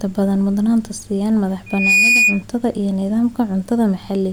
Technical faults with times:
1.66-2.43 loudspeaker feedback squeal

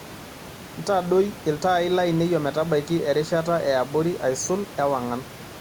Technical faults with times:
none

